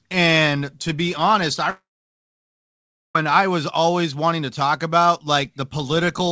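From 1.70 to 3.16 s, after "to be honest I", a long network dropout is likely: the last sound stretches into a brief fading buzz, then about 1.3 s of near silence until "I was always wanting". The waveform goes flat there, and the spectrogram shows a blank gap beneath the call path's 8 kHz ceiling.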